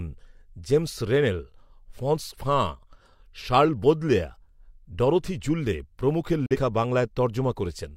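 At 6.46 to 6.57 s, after "ডরোথি জুল্লে প্রমুখের", a digital broadcast dropout fades to silence within 3 ms. The gap is empty rather than smeared, as if one frame was lost, and it does not repeat.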